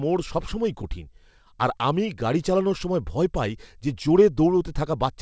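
From the start, the speech carries clock drift between sender and receiver: the sending device's audio clock runs roughly 5 percent fast relative to the receiver's. Samples therefore arrive faster than they are played out, and the jitter buffer keeps creeping fuller. On a waveform nothing looks broken, but segment boundaries sit slightly earlier than a steady clock would place them. On a spectrogram, which stops at 8 kHz as expected for the G.722 path, formant tracks show small irregular discontinuities.

Between 0.06 and 5.06 s the receiver makes repeated timing corrections to keep that buffer from overflowing, discarding short slices of audio so that playback effectively runs at 105 percent speed. The trims are all deletions, unevenly spaced, each short. If heard at all, they come across as faint hiccups and a slightly rushed, uneven pace. In the waveform they appear as small splice points where a cycle ends abruptly. 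The spectrogram shows thin vertical seams and briefly shortened harmonic stretches.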